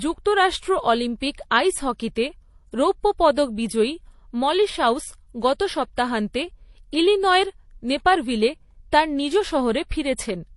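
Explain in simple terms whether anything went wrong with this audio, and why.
The speech sounds dull and watery from start to finish, with nothing heard above about 11.3 kHz. The likely cause is transcoding between lossy codecs: HE-AAC first, then MP3, each adding its own smearing and keeping the lower treble cut.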